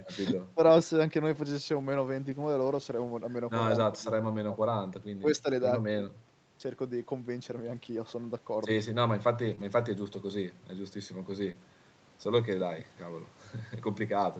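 At 0.73–0.87 s, 1.73–2.23 s, 2.61–3.07 s and 7.59–7.77 s, lost packets are rebuilt from error correction. Each missing packet is replaced by the low-bitrate copy carried in the next one, so there is no gap, just a rougher, noisier stretch. On a spectrogram these spans show blurrier harmonics and a grainier noise floor.

The same repair recurs at 9.47–9.53 s. A short concealed packet loss follows at 9.55–9.59 s: about 20 ms never arrived and was filled by extending the preceding sound, heard as a brief smear.

Error-correction rebuilds continue at 9.59–9.90 s and 11.44–11.50 s, and a second concealed loss at 11.52–11.56 s gives another quick smear.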